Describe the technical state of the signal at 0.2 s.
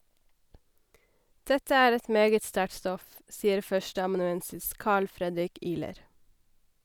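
The speech is intact at 0.2 s, with no fault present at that point.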